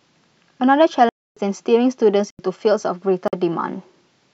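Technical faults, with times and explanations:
1.09 to 1.37 s, 2.30 to 2.39 s and 3.28 to 3.33 s, block of digital silence: the speech drops out abruptly three times, for about 275 ms, 85 ms and 49 ms. The first is a clear hole and the shortest is a brief hole. Each time, a run of samples was replaced by zeros, cutting the signal with no fade. The 85 ms gap fits a 4096-sample buffer that was not filled in time.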